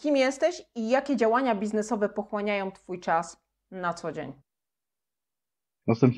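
A speech recording, and nothing is technically wrong with it.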